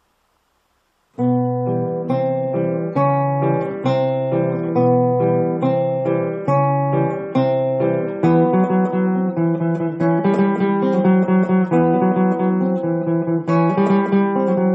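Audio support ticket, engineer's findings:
Compressed frames skipped at 10.18 s. Audio jumps ahead by about 40 ms, roughly two frames of 21.3 ms. Decoder stage. Frames missing from the file or rejected as damaged, so playback resumes later with an audible break at the join.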